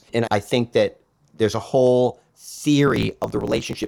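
From 2.86 s to the end at 3.87 s, a block size mismatch (truncated) sets in: one stage hands over longer blocks than the next stage takes, so the tail of every block is dropped. The buzz this leaves repeats at 46.9 Hz, which fits a reader taking 1024 samples at a time. Because part of each block is discarded, the speech runs 1.12 times faster while its timbre is kept.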